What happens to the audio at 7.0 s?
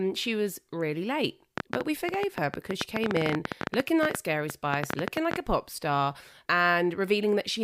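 At 7.0 s the speech continues intact, with no dropout, click, distortion or other fault audible at that point.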